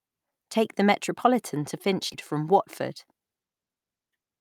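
At 2.13 s the speech skips ahead. About 400 ms of audio never plays. The receiver had fallen behind, with later audio already waiting, and that stretch was discarded. Nothing fills the hole. The two sides meet almost directly, so the sound lurches forward with no pause. The listening delay shrinks by roughly the same amount.

From 2.91 to 3.43 s a jitter buffer speed-up follows. The buffer held more audio than it wanted. To catch up, the receiver cut many tiny pieces, each one or a few pitch periods long. Around 50 ms goes in total. Playback runs at about 109 percent speed. The pitch stays the same, but the speech sounds rushed.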